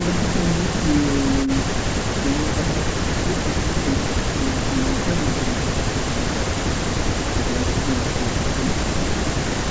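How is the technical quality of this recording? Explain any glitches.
The technical quality is good, with no glitches to explain.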